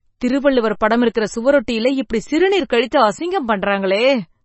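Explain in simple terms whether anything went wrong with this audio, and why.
The speech sounds watery and dull throughout, with nothing above 8 kHz, likely from heavy MP3 compression throwing away treble and faint detail to save space.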